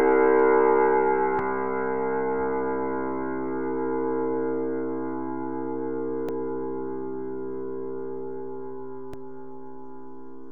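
Damaged data in a compressed stream at 1.39, 6.29 and 9.14 s: corrupted bytes make the decoder misread frames and lose sync, producing brief chirps or blips.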